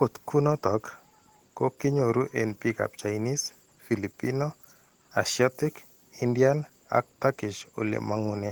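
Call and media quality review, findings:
Opus voice compression, whole clip. Speech plainly hoarse, slightly robotic. Band still reaches about 20.1 kHz, which fits hybrid mode: SILK prediction below 8 kHz, CELT above. Excitation coded coarsely, consistent with roughly 16 kbps in 20 ms frames.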